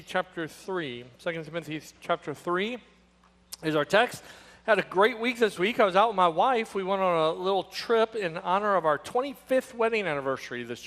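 From start to finish the sound is dull and carries a gurgling, granular distortion, consistent with MP2 compression, likely at a low rate near 80 kbps. Layer II divides the signal into 32 equal sub-bands and shares out bits among them; here the budget is too tight, so the upper bands drop out and flicker back in, while the bands that remain are coarsely quantised. The effect is plainly audible throughout the clip.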